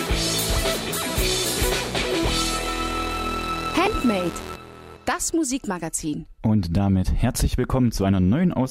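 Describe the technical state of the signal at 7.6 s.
At 7.6 s the signal is intact, with no dropout, clipping, glitch or other technical fault audible at that point.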